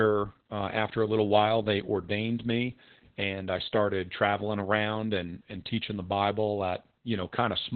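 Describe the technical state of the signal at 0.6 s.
At 0.6 s the speech sits inside heavy Opus voice compression that runs through the whole clip. The encoder is in its SILK linear-prediction mode at narrowband, which fits a rate around 8 kbps, and it codes the excitation coarsely in 20 ms frames. Nothing survives above about 4.2 kHz, so the speech sounds muffled and telephone-thin, with a hoarse, slightly robotic grain where the coarse excitation replaces natural breathiness.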